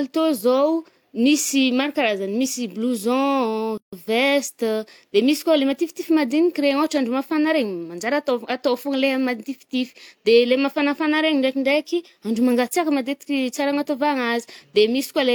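A gap at a join of encoded pieces opens at 3.78 s and lasts until 3.93 s, a silence of about 150 ms dropped into the middle of continuous speech. The recording appears to have been encoded in separate sections and spliced without trimming, so the encoder's start-up delay and the padding on the final frame were both left in at the seam. The speech stops abruptly, the edges softened by the codec, then resumes exactly where it broke off.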